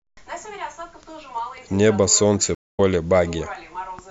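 At about 2.55 s there's a stream reconnect: the connection dropped, the player went quiet for roughly 0.21 s, then reconnected with a fresh decoder. The speech picks up around 2.8 s but lands a bit later, skipping something like 150 ms.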